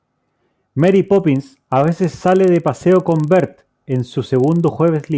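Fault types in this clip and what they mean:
Resampler restarted on every block: each 40 ms block was converted from 48 kHz to 16 kHz in isolation, leaving edge errors heard as a 25 Hz tick-buzz under the speech.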